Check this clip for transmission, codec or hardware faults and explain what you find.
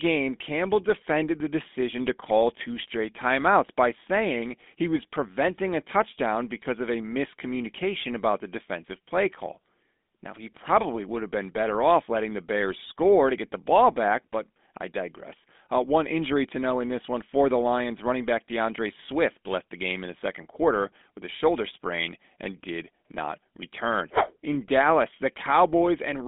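The speech carries one codec fault, present for the whole clip.

GSM full-rate codec, throughout: the vocal tract is modelled and driven by a sparse, regularly spaced pulse train, which fits a 13 kbps GSM full-rate stream. The band runs about 200 Hz to 3.6 kHz with nothing above 3.8 kHz, and a buzzy, gravelly roughness is plainly audible.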